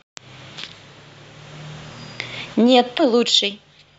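At 2.94 to 3.00 s the speech hits damaged data in the compressed stream: corrupted bytes leave the decoder unable to read those frames, so it loses sync and hunts for the next valid frame header. The result is a brief glitch lasting about 60 ms.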